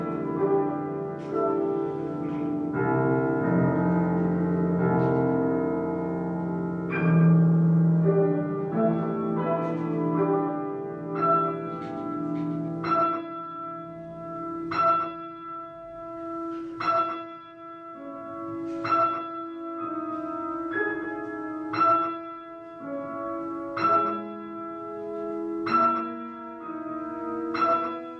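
No technical faults can be heard anywhere in the audio. There is nothing in it to mark with a time.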